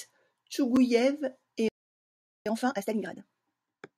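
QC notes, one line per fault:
0.76 s, block of digital silence: about 5 ms of samples dropped to zero. The speech cuts to silence and back with no fade, and the hard edges come through as a single tick.
1.68–2.46 s, playback stall: the player likely ran out of data or had its thread blocked, so output stopped for about 0.77 s. The speech halts mid-flow, leaving a clear dead gap before sound resumes.
2.46–3.22 s, time-compressed catch-up: to clear the backlog built up during the stall, the player removed small pieces and cross-faded the remainder, running at twice normal speed. The speech sounds hurried at unchanged pitch.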